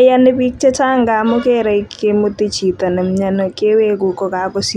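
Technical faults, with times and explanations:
No technical faults can be heard in this speech recording. There is nothing here to time or explain.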